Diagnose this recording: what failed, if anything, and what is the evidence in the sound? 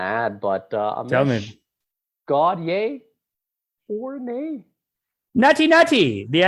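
Nothing failed: no stage in the chain, from analogue wiring through conversion, buffering, processing, transmission, storage or playback, leaves any detectable mark on this speech recording.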